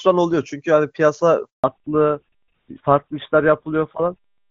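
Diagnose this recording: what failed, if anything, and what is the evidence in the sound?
Network stage. A handover gap silences the speech from 1.50 to 1.64 s. For 140 ms the call switches links and no speech frames arrive.

Codec stage. A fallback to narrowband starts at 1.64 s and lasts to the end. Nothing above 4 kHz survives. The speech turns duller than the clear HD Voice opening, which fits a GSM full-rate codec.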